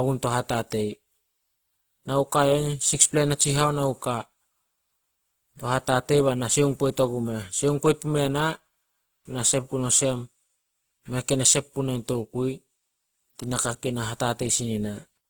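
The whole way through, the speech has a grainy, rough texture that sounds like Opus compression, likely running at a low bitrate, around 16 kbps, in its music-style CELT mode. There aren't many gaps in the spectrum. Instead the encoder runs short of bits and fills bands with folded or noisy energy, so tonal parts come out coarse and hissy. The damage is plainly audible, though the top end still reaches about 20.2 kHz.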